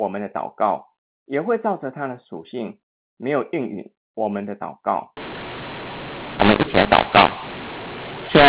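From 5.17 s to the end, mu-law and A-law are mixed up: telephone audio coded as mu-law is decoded as A-law, scrambling levels so speech turns harsh and gritty and pauses fill with noise. Unlike plain clipping, quiet passages get louder and noisier instead of staying clean.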